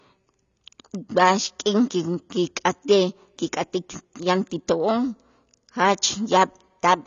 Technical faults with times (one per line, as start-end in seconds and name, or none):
0.00-7.07 AAC compression